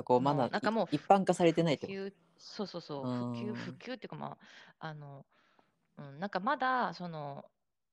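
Nothing goes wrong anywhere in this speech recording, so there's no fault to point to at any moment.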